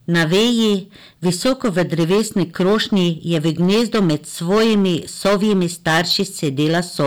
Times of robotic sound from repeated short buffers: none

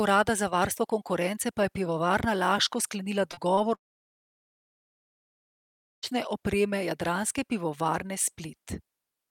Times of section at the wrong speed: none

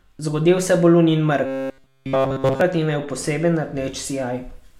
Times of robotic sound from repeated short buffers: 1.46-2.61

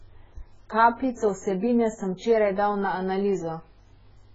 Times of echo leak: none

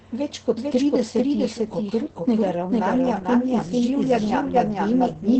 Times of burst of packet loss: none

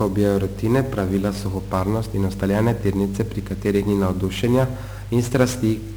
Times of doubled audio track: none

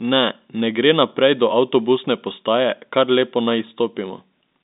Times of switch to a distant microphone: none

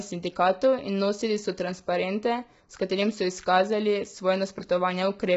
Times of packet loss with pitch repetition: none

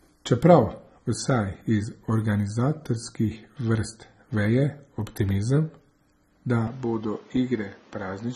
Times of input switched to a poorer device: 6.67-8.35

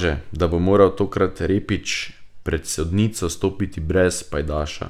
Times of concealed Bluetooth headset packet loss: none

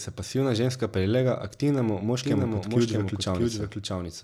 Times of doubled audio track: 2.23-4.23

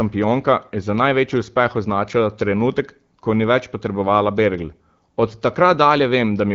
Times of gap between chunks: none

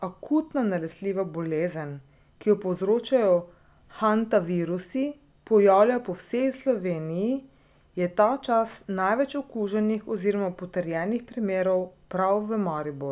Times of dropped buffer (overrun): none

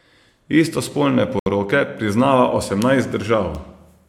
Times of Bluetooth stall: 1.39-1.46

